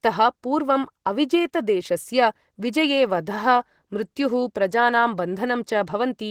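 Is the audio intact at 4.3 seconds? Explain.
No. Opus voice compression runs through the whole clip, including 4.3 s, in hybrid mode: linear-prediction coding of the lower band with a transform layer above 8 kHz, coarsely quantised at what suggests roughly 16 kbps. The speech comes out audibly hoarse and slightly robotic.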